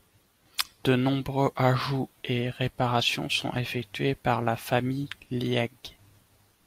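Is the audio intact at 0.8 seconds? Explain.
Yes, the speech at 0.8 seconds plays through intact, with no audible fault at that moment.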